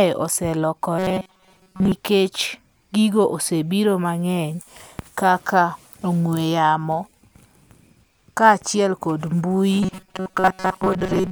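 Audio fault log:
0.99–1.92 s and 9.83–11.31 s: robotic sound from repeated short buffers. A rigid, metallic buzz at 188 Hz, which fits a chunk of about 5.3 ms being replayed to fill gaps, likely from audio arriving too seldom. Most of the real speech is skipped.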